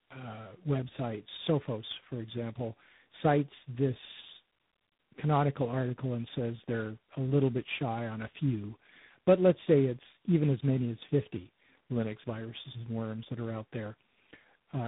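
Tandem speech coding runs through the whole clip: the speech sounds like it crossed several differently coded links, decoded and re-encoded at each hand-off, with three lossy speech coders stacked in a row. Each stage works on the previous one's damage, so the speech comes out rough, muffled and warbly, with nothing above 3.8 kHz. The final texture points to a low-rate ADPCM stage such as G.726 at 24 kbit/s.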